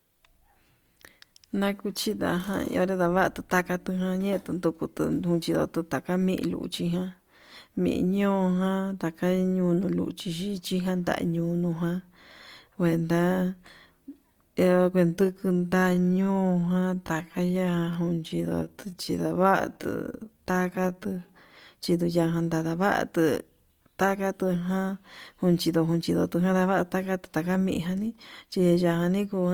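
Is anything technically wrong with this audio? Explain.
Yes. From 15.01 to 21.29 s there's a time-stretched section: the speech slows to about 0.68× speed and drags. This is likely software repeating short pieces to lengthen it, and the pitch holds steady, unlike a plain slowdown.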